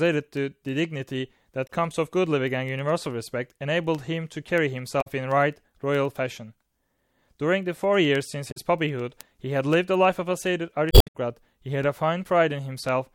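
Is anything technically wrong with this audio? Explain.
Yes, there are two separate faults in this speech recording.

Word clock ticks run from 0.16 s to 13.10 s, a steady train of sharp clicks roughly every tenth of a second, around 150 in all. The digital link was received by a device on its own clock, mismatched to the sender's by roughly 200 ppm. Each time the two clocks drift one sample apart, a single sample is dropped or repeated, and that discontinuity is heard as a tick.

Damaged data in a compressed stream shows up four times: 1.66 to 1.70 s, 5.00 to 5.07 s, 8.50 to 8.57 s, and 10.88 to 11.16 s, the last being the longest at about 0.27 s. Corrupted bytes in the encoded stream made the decoder misread frames and lose sync until it found the next valid frame header. Each event is a brief chirp or blip.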